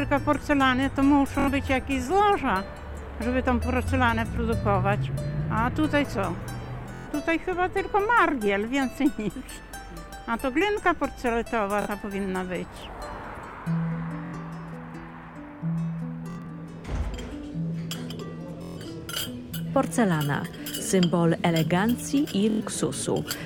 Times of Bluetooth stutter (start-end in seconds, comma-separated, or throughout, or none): 1.40-1.48, 6.94-7.08, 11.82-11.88, 14.26-14.34, 16.30-16.51, 18.62-18.78, 22.50-22.61